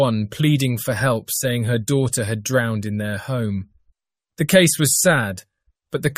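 A speech clip with nothing technically wrong to report.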